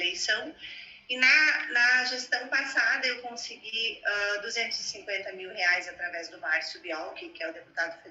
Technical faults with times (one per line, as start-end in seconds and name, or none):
3.69-3.74 short stall from a late packet